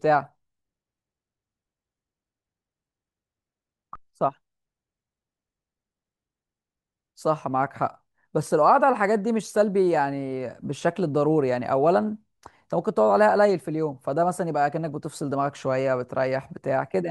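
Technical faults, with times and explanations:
No technical faults can be heard in this speech recording.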